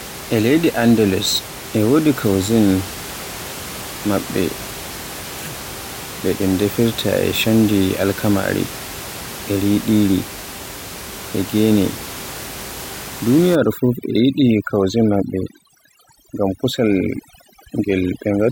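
From 13.55 s to 18.51 s, overdone noise removal cuts bands near the estimated noise floor, so the room noise, about 14 dB below the speech, collapses into twinkling specks.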